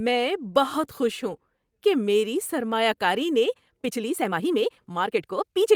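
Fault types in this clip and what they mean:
Time-stretched section: from 3.51 s, right after "میری سرمایہ کاری نے", to 5.75 s, the speech runs 1.65 times faster with unchanged pitch, sounding rushed, likely from software shortening the passage by discarding short slices to fit a target length.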